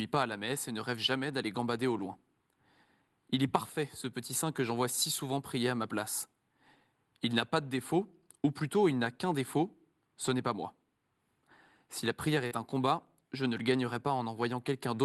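Short concealed packet loss occurs from 12.47 to 12.53 s, right after "la prière". About 40 ms of the call's speech arrived too late for the decoder. The receiver covered roughly 35 ms of that gap by extending the preceding sound, then crossfaded back into the real signal. The result is a brief smeared wobble where a short consonant may drop out, heard through Opus call audio that tops out near 12 kHz.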